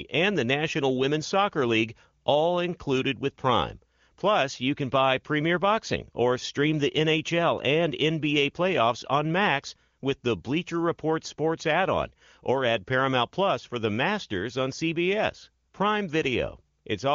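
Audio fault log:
No faults logged; the speech sounds like AMR wideband (HD Voice) coding at or near its highest rate, with clear articulation and the band topping out around 7 kHz.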